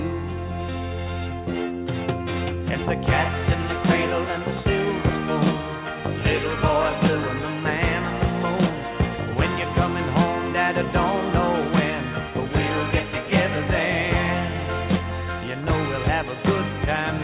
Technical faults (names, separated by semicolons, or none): none